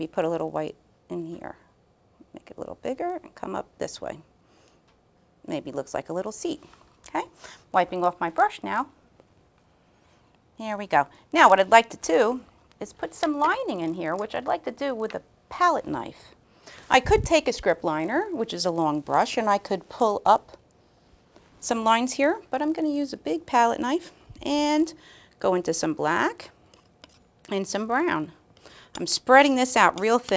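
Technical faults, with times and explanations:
Throughout, resampler restarted on every block: edges every 20 ms lack true neighbouring samples, giving a 50 Hz buzz with signal; spectrogram shows evenly spaced vertical streaks.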